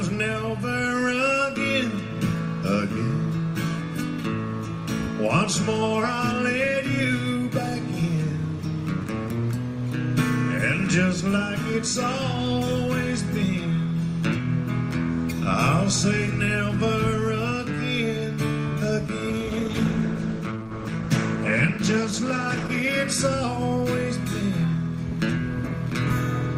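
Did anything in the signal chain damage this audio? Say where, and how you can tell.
Yes. From 19.31 to 22.99 s the sound turns rough and dull, a call bitrate drop: the codec codes coarsely and loses highs, consistent with 32 falling to 13 kbps.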